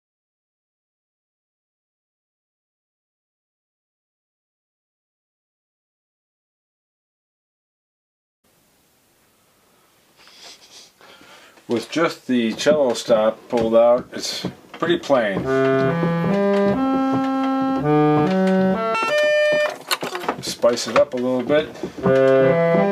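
From 18.95 to 20.24 s the audio plays at double speed and a full octave higher, the sign of audio read two samples at a time, with sample pairs taken as single frames. Unlike a pitch shift or clean resample, nothing filters the upper range before it is halved in duration.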